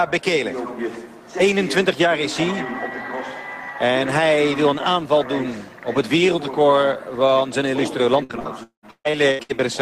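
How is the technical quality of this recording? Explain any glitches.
The recording has one glitch, near the end: repeated packet loss with a robotic sound, from 8.23 to 9.51 s. Over those 1.3 seconds the stream drops out seven times, losing about 620 ms in total, with the longest gap lasting 196 ms. Each hole is filled by stretching the preceding sound forward, so nearly half of that stretch is synthetic. The result is choppy sound with pieces missing rather than silent dropouts. The repeated, rapid patching also sets it apart from a single clean gap.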